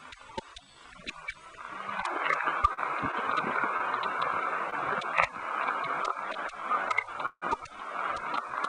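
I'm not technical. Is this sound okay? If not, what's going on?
No. At 2.73 to 2.79 s, 3.77 to 3.82 s and 4.70 to 4.74 s there is a short stall from a late packet: a piece of sound arrived late, so the receiver held the last bit for about 40, 35 and 20 ms, then carried on without losing anything.

At 7.26 to 7.44 s comes a call audio freeze: the sound hangs as a fading buzz, goes quiet for about 60 ms, then resumes where it stopped. The likely cause is a batch of delayed packets.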